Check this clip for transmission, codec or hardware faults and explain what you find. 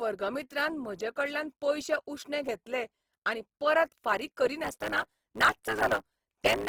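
Two faults are present in this speech clip. One affects the whole clip and one affects the last two seconds.

Opus compression runs throughout. The speech sounds rough and grainy, and the codec damage is plainly audible. The band stays full, reaching about 20.2 kHz. The cause is likely Opus in its music mode at a low rate, around 16 kbps. Starved bands get filled with folded or noisy content.

A block size mismatch (truncated) starts at 4.63 s, just after "घेतले आनी परत फारीक", and lasts to the end. One stage writes longer blocks than the next reads, so each block's tail is dropped. This makes a 109 Hz buzz, and the speech runs 1.09 times faster with its timbre kept.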